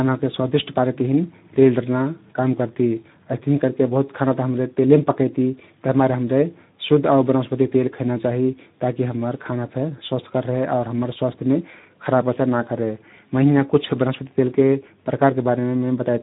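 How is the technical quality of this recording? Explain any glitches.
The quality is limited by one fault throughout: Speex codec damage. Speech sounds hoarse and noisy. Nothing survives above 3.8 kHz. The low-bitrate CELP coding, which fits about 11 kbps, leaves too few bits for the excitation, so the voice roughens.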